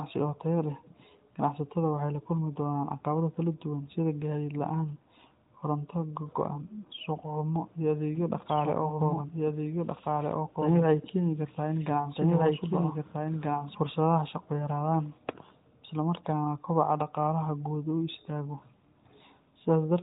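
From 8.15 to 13.75 s there's a doubled audio track: a second full-band copy of the speech, about as loud as the original, trails roughly a second and a half behind, starting abruptly just before "fursadaha shaqo yaraadaan". It's likely a second capture path or a misaligned edit.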